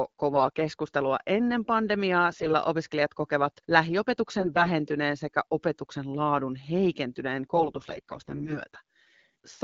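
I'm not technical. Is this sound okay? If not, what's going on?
No. There are four short rough patches caused by AMR bit errors, at 0.30 to 0.47 s, 2.31 to 2.54 s, 4.40 to 4.68 s, and the longest from 7.53 to 8.59 s. A weak phone connection damaged parts of the coded speech. The voice keeps its pitch and loudness there but turns hoarse, scratchy and gargly. The patch around 2.3 s is the most damaged. The HD Voice coding itself sounds clean between these patches.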